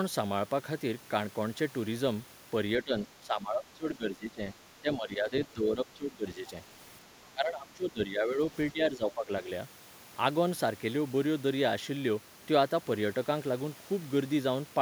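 From 2.83 to 4.42 s, 4.81 to 6.55 s, 7.32 to 8.39 s and 8.72 to 9.5 s, the speech repeatedly sinks in level, by around 15 dB in the first three stretches and around 10 dB in the last, over roughly 0.7 to 1.5 s each time. This is speech suppressed in double talk, likely an echo canceller mistaking the near talker for loudspeaker echo while both ends spoke, and attenuating everything.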